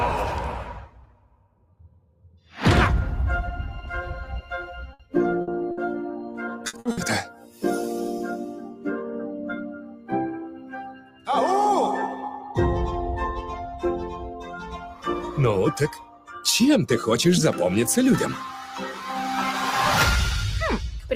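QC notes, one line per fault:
Throughout: noise suppressor applied to music or sounds. A suppressor built for speech stays active over the whole clip. It treats held tones, ambience and decays as noise. Its gain swings by about 15 dB as it decides what to keep. Attacks pass mostly intact. Sustained parts and tails get pulled down. The result pumps and thins. Level rises and falls with the material rather than with any real change in the source.
0.78–2.57 s, 4.42–5.14 s, 7.28–7.63 s, 9.71–11.29 s, 12.23–12.56 s, 14.12–16.43 s, 18.63–19.05 s: sound cut by the noise suppressor. In each stretch the suppressor judged the sound to be noise and ducked it. The deepest drops reach about 17 dB in the first two, and about 15 and 16 dB at 9.71 s and 14.12 s. The others are shallower, from about 10 dB down to about 5 dB. Steady and decaying parts sink or end early, while sharp onsets survive.
4.93–5.02 s, 5.41–5.50 s, 5.71–5.80 s, 6.67–6.76 s, 6.79–6.88 s, 6.91–7.00 s: burst of packet loss. 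Six gaps of about 60 ms each. The receiver stretched the last sound for about 60 ms and faded it out. Then playback jumped ahead, so about 60 ms of audio is gone at each point. It sounds like a short held buzz or fading hiss, then a skip. The last three come in quick succession.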